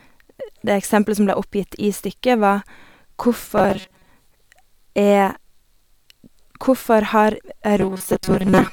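From 3.58 to 4.09 s and again from 7.77 to 8.72 s, the speech turns into a robotic sound from repeated short buffers. It is a rigid metallic buzz at 188 Hz, with about half, then most, of the audio replaced. The likely cause is roughly 5 ms chunks being looped. On a spectrogram this shows as evenly spaced harmonic stripes, and the waveform shows identical repeating cycles.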